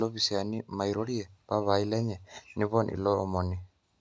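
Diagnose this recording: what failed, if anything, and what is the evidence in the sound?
Nothing stood out on listening to this speech recording, which carries the expected signature of a call's microphone processing, with the lowest bass trimmed and nothing above 8 kHz.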